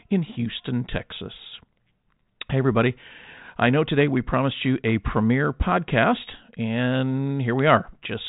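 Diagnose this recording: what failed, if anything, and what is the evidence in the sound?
Nothing failed in this recording.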